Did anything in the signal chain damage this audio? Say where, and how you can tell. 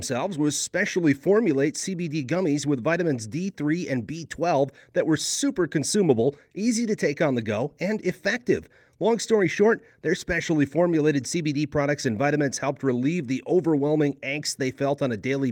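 No, there's no damage from any stage of the signal chain to be heard anywhere in this speech recording.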